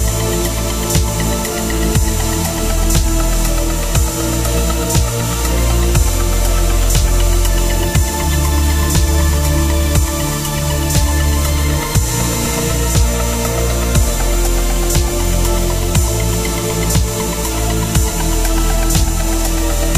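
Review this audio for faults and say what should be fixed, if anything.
Nothing here needs fixing; no faults are audible.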